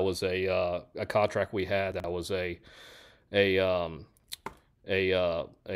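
Speech with chunks out of order twice, at 1.92 to 2.04 s and 4.16 to 4.24 s. A 40 ms block lands late, apparently two blocks behind in the first case and one in the second, so the sound jumbles briefly at the hard joins.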